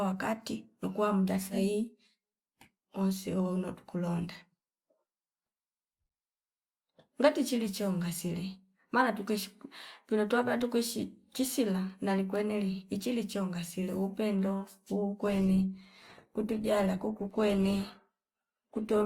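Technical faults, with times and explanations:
15.25 s to the end, adaptive stream at a lower bitrate: the quality steps down abruptly with no gap, and codec artefacts creep in. That fits the stream switching from something like 64 kbit/s Opus down to about 16 kbit/s when the connection slowed.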